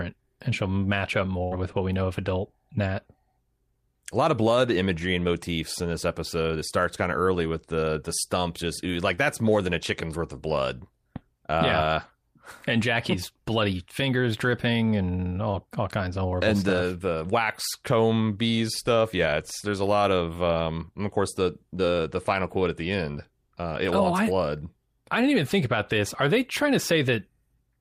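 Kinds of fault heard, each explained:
Burst of packet loss: Between 1.43 and 1.53 s, right after "and she'll match up", roughly 80 ms of the speech stream failed to arrive in time. The receiver continued the last sound and turned it down for about 78 ms, then picked up at "with what we know" with that stretch gone. The audible filler and missing stretch set it apart from the brief smears later.
Short concealed packet loss: Twice, about 20 ms of the speech never reached the decoder: at 9.15 s after "the stump just like", patched over with about 22 ms of continued sound, and at 21.77 s after "and of course the", patched with about 12 ms. Each time the receiver extended the previous sound and blended back, leaving only a quick smear or wobble rather than a held, decaying buzz.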